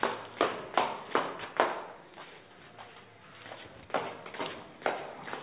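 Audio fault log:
Nothing stood out on listening to this sound.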